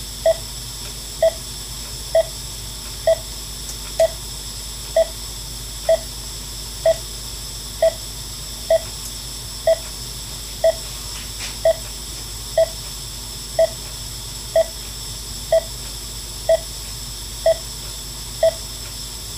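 Mains hum runs from start to end. A steady low tone sits at 50 Hz, with some low harmonics above it. It stays about 15 dB below the sound. A ground loop or nearby transformer let the power line leak into the signal path.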